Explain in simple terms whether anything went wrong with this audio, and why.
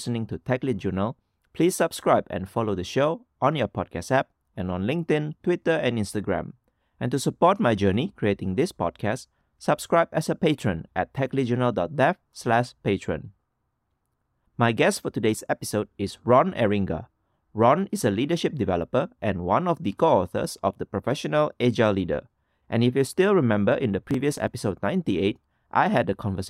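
Processor overload crackle from 23.99 to 24.47 s in this speech: the computer fell behind and skipped several tiny, roughly 5-millisecond chunks, producing a brief gritty tearing.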